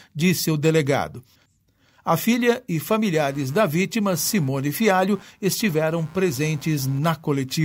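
From 2.88 s, just after "filha e", computer activity noise enters and lasts to the end. Load changes in the computer shift the ground shared with the audio circuit, and those shifts leak in as a scratchy buzz pulsing around a hundred times a second, sitting some 30 dB below the speech and following the machine, not the talker. A spectrogram shows evenly spaced vertical striations running through pauses and speech alike; the waveform carries a fine, rapid ripple.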